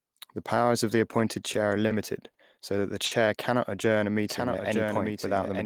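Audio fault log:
1.87–1.92 s, 2.30–2.37 s and 3.05–3.13 s: short stall from a late packet. Three times the speech hangs on its last sound, for 30, 50 and then 60 ms, with a faint buzzy hold before it resumes exactly where it stopped. Nothing is skipped, because the receiver was only waiting for a late packet while its jitter buffer ran dry, and each wait adds that much to the running delay. That separates it from a dropout, where speech vanishes.
4.30 s to end: doubled audio track. A second copy of the speech enters abruptly, trailing the original by about a second, a little quieter at roughly 5 dB down, and runs to the end of the clip. It keeps the full frequency range and has no reverberant tail or room colour, so it sounds like a clean duplicate rather than an echo or reflection. The likely cause is the same audio reaching the mix twice, once through a slower path.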